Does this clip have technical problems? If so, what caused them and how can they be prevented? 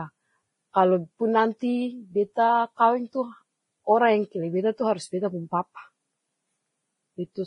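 Yes. Throughout the speech nothing is present above 10.5 kHz, and two different kinds of codec artefacts sit together. This is likely transcoding between lossy codecs, a low-rate Vorbis encode re-encoded to MP3 at around 48 kbit/s, each stage adding artefacts. Encode once from the original source rather than converting between lossy formats.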